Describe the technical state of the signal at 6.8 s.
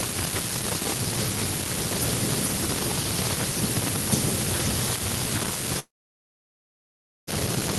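A long network dropout runs from 5.79 to 7.30 s; at 6.8 s there is only silence, the brief concealment buzz having faded, likely because packets stopped arriving.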